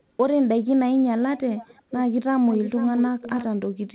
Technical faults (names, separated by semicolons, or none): echo leak